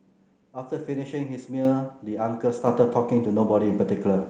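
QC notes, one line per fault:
1.65 s, 2.67 s, 3.69 s: microphone volume stepped up. The speech and its background jump louder together in a sudden step, by about 7 dB, then about 5 dB, then about 2 dB. The call software judged the microphone too quiet and raised the device's input volume in stages, each one smaller.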